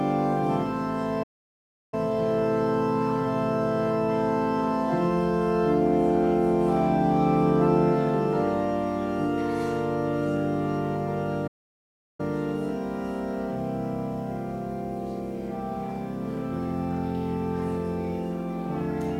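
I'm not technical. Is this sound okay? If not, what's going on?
No. There are two playback stalls: the player likely ran short of data, so the sound cuts to silence for about 0.7 seconds, at 1.23–1.94 s and 11.47–12.20 s.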